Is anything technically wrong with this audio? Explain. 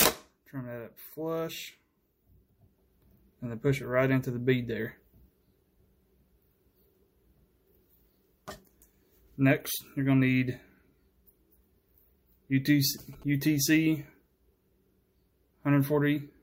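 Yes, there is one fault. GSM signalling bursts, 12.98 to 13.71 s: a nearby 2G phone transmits brief radio bursts while signalling, and the audio circuitry rectifies them into a galloping dit-dit-dit of short buzzes at about 217 Hz, roughly 25 dB below the sound.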